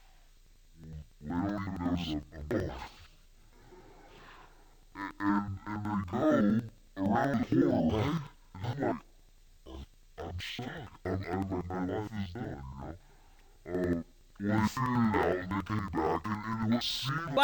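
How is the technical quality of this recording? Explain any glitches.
Not great: there's one fault running from start to finish. It's interleaved audio read as planar. Each block of about 93 ms, which fits a 4096-sample block, has its left-right pairs split into halves, so the audio plays an octave low, doubled and choppy, stuttering around 10.8 times a second.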